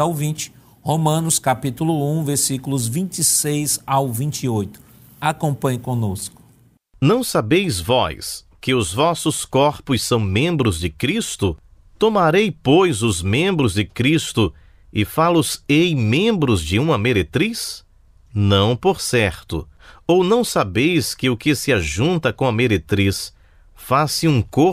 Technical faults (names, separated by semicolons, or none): loose connector crackle